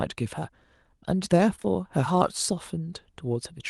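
Short concealed packet loss hits three times in a row, at 1.55, 1.60 and 1.63 s, each time losing about 20 ms before the decoder needed it. The receiver stretches the preceding sound across the gaps and blends back in by 1.66 s, leaving a brief smeared wobble in the speech. Throughout, the Opus call path cuts off the highs above about 12 kHz, which fits a 32 kbps setting.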